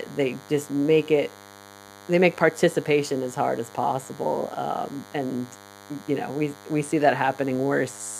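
From the first moment to the last, a thin, steady buzz sits under the speech. This is DECT cordless phone buzz. A nearby DECT handset or base station transmits a short radio burst every 10 ms, and the audio circuitry rectifies it, so a 100 Hz pulse train rich in harmonics leaks in, roughly 20 dB below the speech. Mains hum is smoother and centred on 50 or 60 Hz. This buzz is sharper and rasping, built from dense harmonics of 100 Hz.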